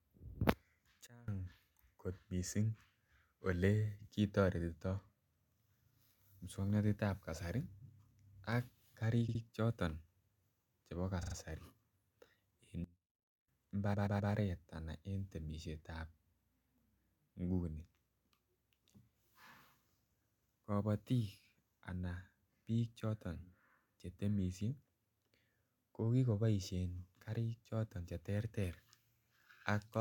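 At 1.07 s the level drops abruptly by about 24 dB and stays down until 1.28 s, then returns. The same sudden gain jump happens again from 12.84 to 13.48 s. The speech and the background noise fall and recover together. The likely cause is a gain change applied from one sample to the next with no ramp. On a waveform the envelope steps down and back up as a clean rectangle. On a spectrogram every frequency darkens at once between two vertical edges.

Repeated frames first appear at 9.28 s: a 64 ms block of the compressed stream is played twice more, so the stretch to 9.41 s stutters and adds 128 ms. At 11.22 s a 42.7 ms block plays three extra times, again adding 128 ms, to 11.35 s. At 13.93 s a 128 ms block repeats three more times through 14.31 s and adds 384 ms. Waveform and spectrogram both show identical copies sitting side by side.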